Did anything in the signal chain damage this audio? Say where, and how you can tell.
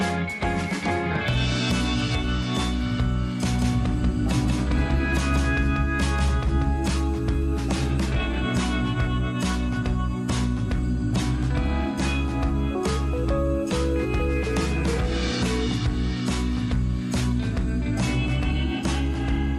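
Yes. A doubled audio track runs from 3.54 to 6.9 s, likely from a second, slower capture path: a full-band copy trails by roughly 200 ms, about 5 dB down, with no decay, unlike an echo.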